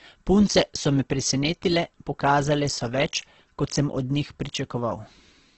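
Throughout, the speech stops sharply at 8.2 kHz and sounds rough and grainy. This heavy damage is likely Opus compression, which fits a bitrate near 12 kbps.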